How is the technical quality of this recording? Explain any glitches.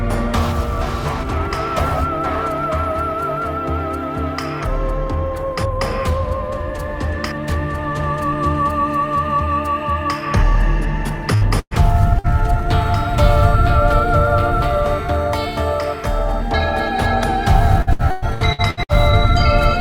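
The recording has two kinds of network dropout, both in the second half.

Burst of packet loss, at 11.35 s, 11.59 s and 12.19 s. At each point a run of audio failed to arrive in time, so the receiver extended the last sound and faded it down. That produced a held buzz or hiss lasting about 58, 117 and 50 ms. In the middle event the fill dies into about 50 ms of silence. The sound then jumps ahead, having lost about 60, 120 and 60 ms.

Repeated packet loss (robotic sound), from 17.82 to 18.92 s. Here losses follow each other closely, with seven gaps in about 1.1 s, the longest 111 ms. Each hole is patched by stretching the preceding sound before the next one hits, so about 43% of this stretch is filler. The result is choppy sound with pieces missing, roughly 480 ms of the original in all.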